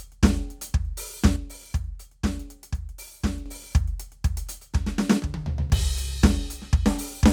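From 1.36 to 3.46 s and again from 5.20 to 5.70 s, the music abruptly drops by about 6 dB and then snaps back, likely because one channel drops out. Apart from the level drop, the sound is otherwise unchanged.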